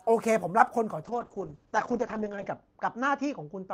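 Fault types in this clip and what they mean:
call bitrate drop: From 1.06 s the speech turns rough and muffled. The encoder is coding with fewer bits, which fits a fall from 32 to around 7 kbps. Bandwidth narrows from 20 kHz to 8 kHz. It never recovers before the end.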